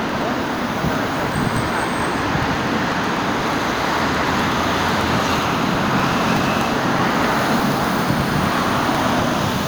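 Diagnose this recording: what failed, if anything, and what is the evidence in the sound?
Periodic USB or driver dropouts at the driver stage: regular ticks every 0.123 s from 0.09 to 9.56 s, each skipping about 2 ms. The spectrogram shows evenly spaced vertical broadband lines, and the waveform shows matching splice discontinuities.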